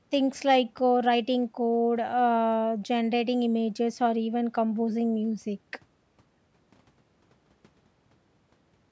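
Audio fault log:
No fault is logged for this audio.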